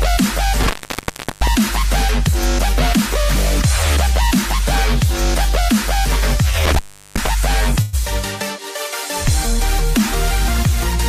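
Intermittent contact occurs from 0.61 to 1.47 s and again from 6.65 to 7.27 s. A loose connection opens for about 0.71 s, then 0.37 s, so the sound drops out with crackle at each edge and faint hiss remains while the line is broken.

Call audio freeze follows at 7.81 to 7.95 s. The last sound is stretched into a brief fading tail lasting 0.115 s, then the audio resumes exactly where it halted, with nothing lost. This likely reflects delayed packets draining the jitter buffer, which inserted a 115 ms gap.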